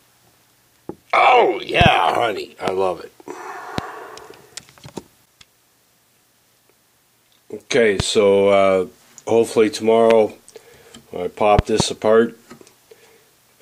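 Loud pops hit at 1.81–1.88 s (a double), 2.68–2.70, 3.78–3.81, 8.00–8.02, 10.10–10.13 and 11.59–11.83 s (a double). Each sharp pulse jumps roughly 15 dB above the sound, which continues beneath. Likely electrical or driver glitches.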